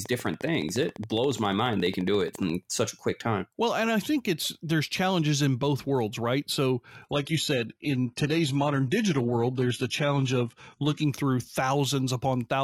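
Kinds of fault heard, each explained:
Train of clicks: from 0.06 to 2.51 s, regular ticks at 14.3 per second over the speech, likely from interference, evenly spaced unlike random crackle, ending before "such a quick time".
Adaptive stream at a lower bitrate: from 7.06 to 11.06 s the quality drops abruptly without a gap, treble stopping near 11.8 kHz with more codec artefacts, fitting a switch from about 96 to 16 kbit/s.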